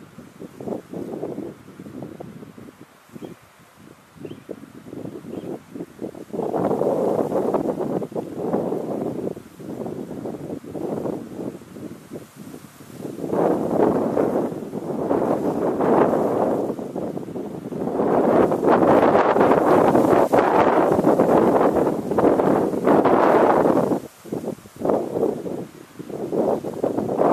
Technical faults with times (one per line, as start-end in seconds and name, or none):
none